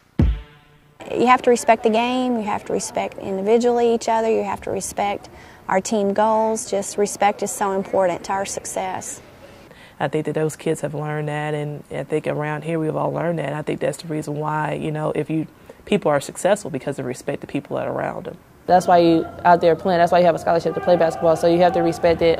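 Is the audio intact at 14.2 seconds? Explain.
Yes, the audio is intact at 14.2 seconds, with nothing there that breaks, distorts or interrupts the sound.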